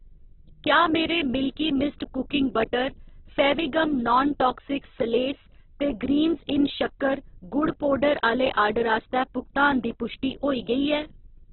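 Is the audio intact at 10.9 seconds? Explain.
No, at 10.9 seconds the speech still carries the Opus compression that runs through the whole clip. Nothing comes through above about 4.1 kHz, and the sound is rough and grainy. That's likely a very low bitrate, around 8 kbps, squeezing the encoder's bands.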